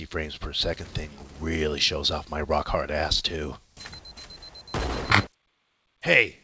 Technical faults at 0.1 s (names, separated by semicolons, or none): none